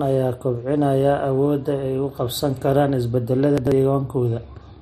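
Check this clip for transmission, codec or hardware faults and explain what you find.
One fault stands out. From 3.58 to 3.72 s there are chunks out of order. A 46 ms chunk played two chunks late, after audio meant to follow it. Nothing is missing. The speech sounds briefly jumbled, with three hard joins.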